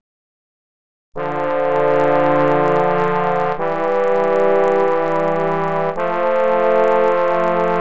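Resampler restarted on every block, throughout the clip: the 24 kHz to 16 kHz conversion handled each 40 ms block in isolation, lacking the neighbouring samples at its edges. Each boundary leaves a small error, producing a steady 25 Hz ticking buzz riding on the sound whenever signal is present.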